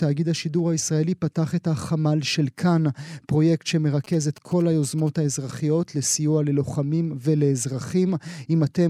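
From 4.04 to 5.09 s, GSM signalling bursts break into the speech for about a second. A nearby 2G handset is sending short groups of radio bursts, the kind of activity that comes before a call or message arrives. The audio circuitry rectifies that RF into a galloping pattern of ticks and brief buzzes at a 217 Hz repetition rate. The interference sits roughly 25 dB under the speech.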